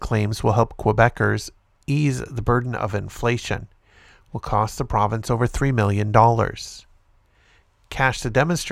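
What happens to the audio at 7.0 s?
Nothing goes wrong at 7.0 s; the speech carries on intact through that moment, with no dropout, click or other fault.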